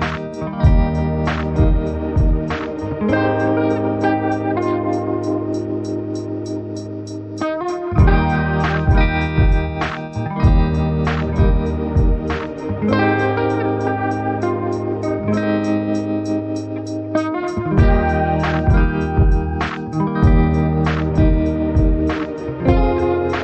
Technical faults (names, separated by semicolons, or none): MP3 compression